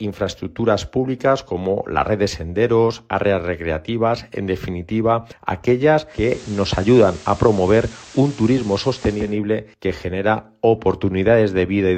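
Audio with digital radio blending to analogue from 6.07 to 9.38 s: a 327 ms cross-fade to FM adds hiss roughly 25 dB below the signal, gradual rather than an abrupt codec dropout.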